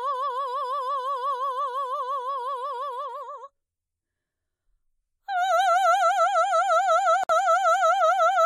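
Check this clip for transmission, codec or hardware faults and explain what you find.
The music has one fault: a gap at a join of encoded pieces from 7.24 to 7.29 s, a silence of about 58 ms. Two separately encoded sections were spliced without trimming the encoder's start-up delay and end padding, so that dead time remains between them. It is heard as a brief dropout before the music resumes exactly where it left off. The waveform shows a flat stretch with slightly softened edges, and the spectrogram shows a narrow vertical blank band.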